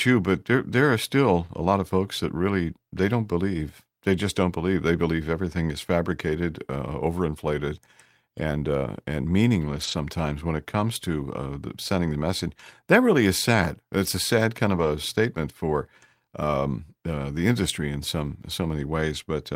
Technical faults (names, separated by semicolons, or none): lost packet rebuilt from error correction; dropped samples